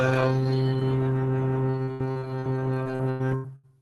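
Music that turns choppy and robotic twice, from 1.83 to 2.44 s and again from 2.84 to 3.66 s. Each stretch holds about five short dropouts, the longest near 80 ms, and roughly a third of each span is filled with stretched-out copies of the preceding sound. That is repeated packet loss: audio packets arrived late or not at all, and concealment kept extending the last sound to cover each hole. The music arrives over a call path whose top end stops around 12 kHz, which fits the Opus codec.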